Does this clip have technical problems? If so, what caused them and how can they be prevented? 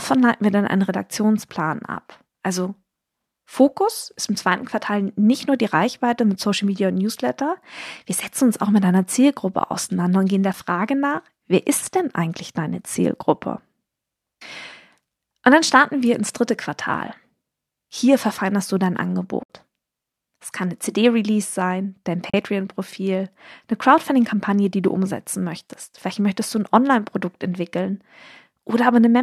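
Yes. AAC frame loss with muting: lost AAC frames were zeroed by the decoder, so the sound fades out and back in, a brief dip for a single frame and a soft-edged hole for a run. This happens at 10.53 s (about 10 ms) after "auseinander und gehen der", from 19.43 to 19.48 s after "verfeinerst du dein", and from 22.30 to 22.34 s after "sein dein". Forward error correction, or concealment that extrapolates the lost spectrum instead of muting it, would prevent these gaps.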